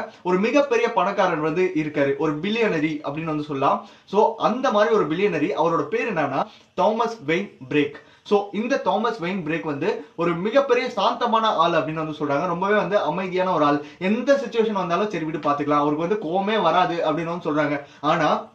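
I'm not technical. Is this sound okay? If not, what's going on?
No. There is one short glitch, from 6.41 to 6.43 s. It comes from damaged data in a compressed stream. The sound was stored in a compact, compressed form, and a tiny piece of that data got corrupted. When the player reached the broken spot, it couldn't read it properly. It lost its place and had to find the next good chunk. That brief stumble comes out as a quick chirp or blip, only about 20 milliseconds long.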